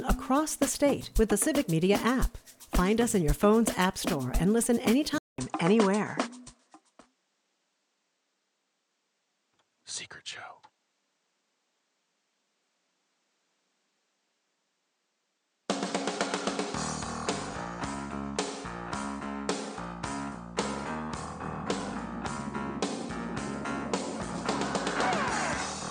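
At 5.18 s the audio drops out for about 200 ms, and from there to the end it comes back duller. Nothing gets through above 9.4 kHz, and a faint new noise floor sits roughly 50 dB under the signal, though the overall level barely moves. That sudden narrowing with a gap right at the join is most likely the input switched to a poorer device, with the recording carrying on through a narrower-band microphone.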